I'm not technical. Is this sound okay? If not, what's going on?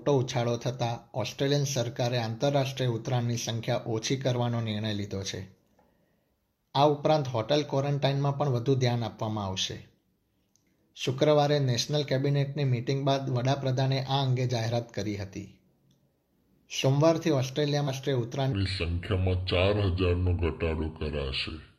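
No. A stream segment skipped at 17.84 to 17.89 s: the sound jumps ahead with a small blip, likely because one chunk failed to load.

A section at the wrong speed runs from 18.53 s to the end, playing at 0.704 times normal speed, so it sounds slow and about seven semitones deeper, likely from a mismatched clock.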